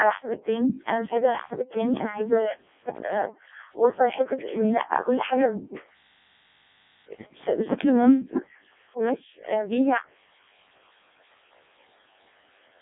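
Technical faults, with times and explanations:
Throughout, Codec 2 vocoder: the speech is resynthesised from sine waves using only pitch, voicing, energy and a coarse envelope, which fits a 700 bit/s mode. That gives a heavily robotic, buzzy voice, unlike plain telephone band-limiting, within roughly 300 Hz–3.7 kHz and nothing above 3.8 kHz.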